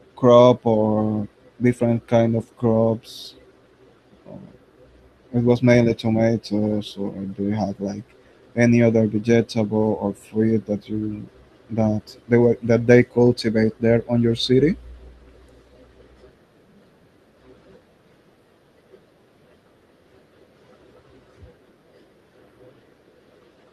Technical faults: none

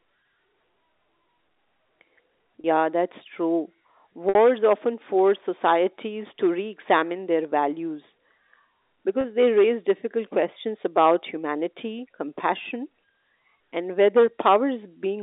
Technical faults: packet loss with pitch repetition

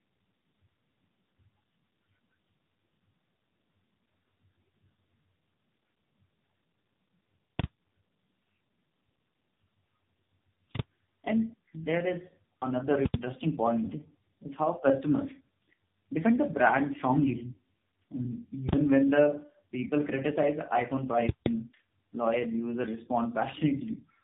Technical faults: tandem speech coding

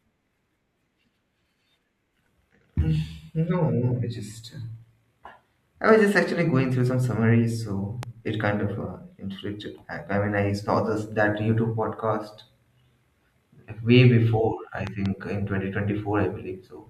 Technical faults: loud pop

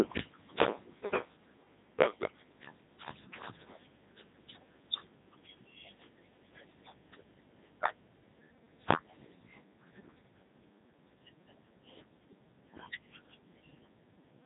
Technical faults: Codec 2 vocoder

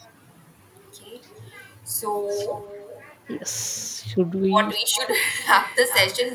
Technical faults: echo with no canceller

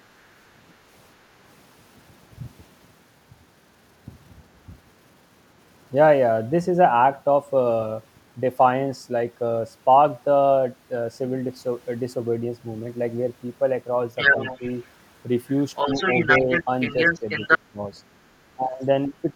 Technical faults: other side's voice leaking through; speech suppressed in double talk

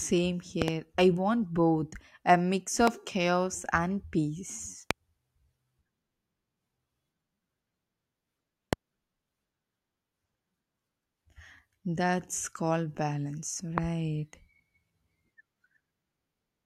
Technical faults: loud pop

